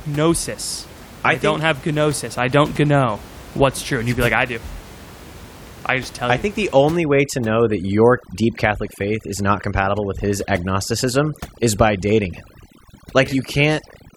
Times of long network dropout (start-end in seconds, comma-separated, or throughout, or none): none